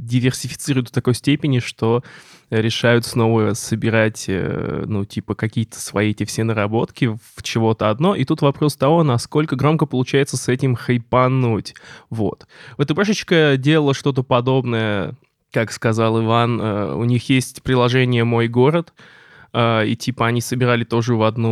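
No technical faults can be heard in this speech recording. Nothing at any point in the audio stands out as a fault.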